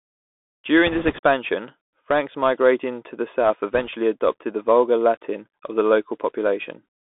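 This is speech carried over a Bluetooth CVSD headset codec throughout. It is audible as a band of roughly 250 Hz to 3.6 kHz, scratchy sibilants and granular hiss, consistent with a 64 kbit/s CVSD stream. Bit errors on the Bluetooth voice link add a rushing crackle from 0.87 to 1.19 s, at an error rate of a few percent. They recur more lightly, at around 1.5 percent, from 3.74 to 3.89 s, between "migrating to the south" and "adopted the vulgar".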